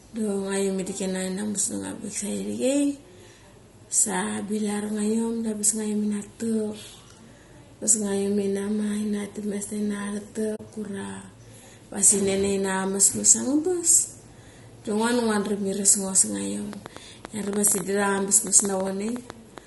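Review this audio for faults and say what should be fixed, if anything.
Throughout, the speech is rough and grainy with noise between harmonics and a thin top band, likely low-delay AAC compression (AAC-ELD) at a low bitrate around 32 kbps, visible as smeared harmonics.

Dropped samples at 8.15, 13.00, 16.26 and 17.71 s give single sharp clicks, thin vertical spectrogram lines, likely from a few samples skipped so the waveform jumps.

AAC frame loss with muting opens a soft-edged 40 ms hole at 10.55 to 10.60 s, consistent with two lost frames zeroed by the decoder. It shows as a tapered gap.

A train of clicks from 16.73 to 19.59 s brings about 20 irregular pulses, roughly 7.7 per second, peaking well above the speech. It is likely interference or a faulty connection, appearing as repeated vertical spikes.

To prevent these, use a higher codec bitrate, protect the stream against packet loss, and fix the interface's buffering and shielding.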